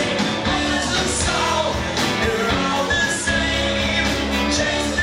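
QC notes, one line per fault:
No faults found anywhere in this clip.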